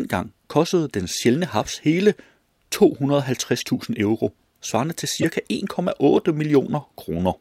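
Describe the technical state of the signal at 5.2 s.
A short, loud chirp-like burst cuts in from 5.18 to 5.24 s, right after "euro svarende til": a corrupt frame decoded, as damaged bits misplaced energy across about two frames.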